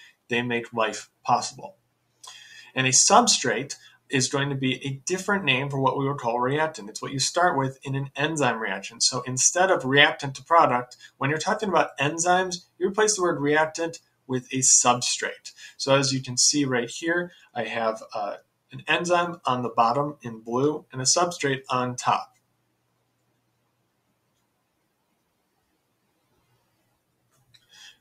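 A noise suppressor applied to music or sounds stays on through the whole clip. It was built for speech, so it treats sustained tones, ambience and reverberant tails as noise and keeps pulling them down. The resulting level swing is around 10 dB. Transients mostly get through, but anything held sinks after its onset, so the sound pumps and thins rather than sitting at a steady level.

Sound cut by the noise suppressor appears in seven stretches: 0.04–2.76 s, 3.76–4.12 s, 10.37–11.21 s, 12.60–12.81 s, 13.99–15.80 s, 17.29–20.95 s, and from 22.26 s to the end. In each one the suppressor judged the material to be noise and cut it more than its surroundings, by about 21 dB at the deepest point. Sustained and decaying parts drop away or lose their tails abruptly. The longest affected stretch is the final one, where roughly five seconds are pulled down.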